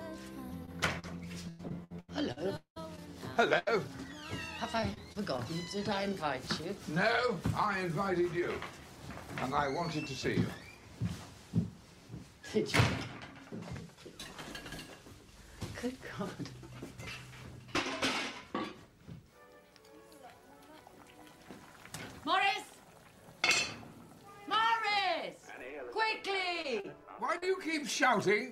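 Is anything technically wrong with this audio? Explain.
Yes, the audio has packet-loss damage, mostly in the opening seconds.

Brief smears or wobbles at 0.65, 0.99, 26.62, 26.8 and 27.38 s are short concealed packet loss: 20 to 40 ms never arrived, and the receiver extended the preceding sound to cover it.

Choppy stretches from 1.49 to 3.01 s and from 4.80 to 5.40 s are repeated packet loss (robotic sound). Gap after gap was patched, up to about 0.19 s each, covering roughly a third of the first stretch.

A held buzz or fading hiss at 3.59 to 3.68 s is a burst of packet loss. About 80 ms went missing, and the last sound was continued and faded until real audio resumed.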